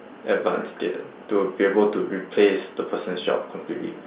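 Nothing stood out on listening to this speech, which carries the narrow band expected of G.711 A-law telephone coding.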